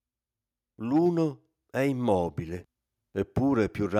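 From 0.79 s to 2.42 s the level climbs steadily as automatic gain rising takes hold: the gain control judged the incoming speech too quiet and pushed its gain up by about 6 dB over roughly 1.6 seconds. The voice and the room noise beneath it swell together, so nothing changes in balance, only in loudness. On a waveform the envelope widens like a slow ramp; on a spectrogram every band, noise floor included, brightens in step.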